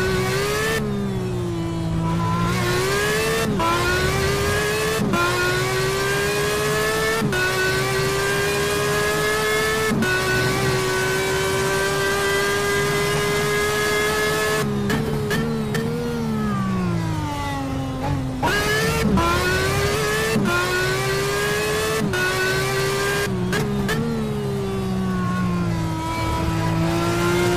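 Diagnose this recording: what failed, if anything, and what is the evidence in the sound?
Nothing failed: no stage in the chain leaves any audible evidence of a fault anywhere in the recording.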